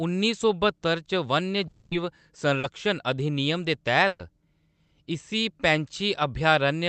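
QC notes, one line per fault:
1.67–1.93 s, long network dropout: For about 240 ms the speech gives way to a synthetic continuation of the preceding sound, a held buzz or hiss that decays without ever reaching true silence, before the speech picks up further along with that stretch gone. The likely cause is an interruption long enough that the receiver had to invent the entire gap from the last sound it had. Around it the audio is band-limited near 8 kHz, consistent with Opus at roughly 32 kbps.
2.59–2.65 s, short concealed packet loss: Just before "अधिनियम दे", about 40 ms of speech is replaced by a brief smear. The decoder never received that slice in time, so it extended the previous sound, carrying its pitch if voiced or reshaping it as noise if not, and then crossfaded back into the real signal. The result is a short wobble, and any brief sound inside those 40 ms is missing.
4.07–4.21 s, burst of packet loss: Right after "अधिनियम दे", roughly 120 ms of consecutive audio failed to arrive or came too late for playout. 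The receiver stretched the last sound across the gap and lowered its level as the gap continued, which is why a held buzz or fading hiss is heard instead of silence. The speech then resumes further on, and the 120 ms in between is lost.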